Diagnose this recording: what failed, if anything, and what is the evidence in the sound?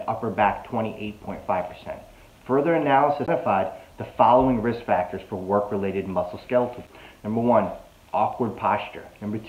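The playback stage failed: the CD player's laser was knocked off its track, or a disc flaw made it jump, and it landed on a different turn of the spiral. The player mutes briefly, then carries on from the new position. The CD skip is heard twice, at 3.26 s with a gap of around 15 ms and at 6.87 s with a gap of only a few milliseconds. Each is a tick or short dropout followed by an abrupt jump in the sound, where the audio continues from another point on the disc.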